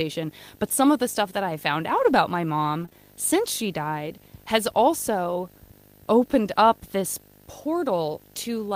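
A low 50 Hz buzz with a fizzy hash above it, and a whistle near 15.6 kHz, runs under the speech for the whole clip, roughly 25 dB down. This is video or display buzz: a screen or video cable coupling into the audio at the picture's field and line rates.

From 1.89 to 2.11 s the speech turns grainy and noisy, but it never drops out. This is a lost packet rebuilt from error correction: six separate lost packets, about 120 ms in total, were replaced by the lower-quality backup copies carried in the following packets. The same roughening returns from 2.81 to 2.95 s, where a single 20 ms packet was rebuilt the same way.

Within that second stretch there is a short smear and wobble, from 2.85 to 2.89 s and again from 2.89 to 2.93 s, where the sound seems to hang briefly before easing back. These are two short concealed packet losses. Each time about 20 ms of audio never arrived, and the decoder filled the hole by extending the preceding sound and then blending back into the real signal.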